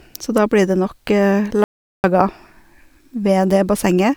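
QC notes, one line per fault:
1.64–2.04 s, audio dropout to silence: the input feed was likely lost for about 400 ms while recording continued, so silence was written. The speech cuts off abruptly mid-flow, leaving total silence with no room tone, then resumes just as suddenly, with that stretch missing.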